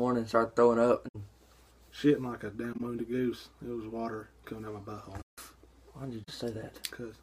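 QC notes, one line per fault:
1.08–1.16 s, 2.73–2.81 s, 5.21–5.38 s, 6.23–6.31 s: corrupt frame concealed. Three are about 80 ms long, which fits roughly three damaged AAC frames. The one at 5.21 s is about 170 ms, consistent with around seven frames. The decoder detected the broken data and covered those frames itself. It muted them or filled them with a scrambled copy of the last good spectrum.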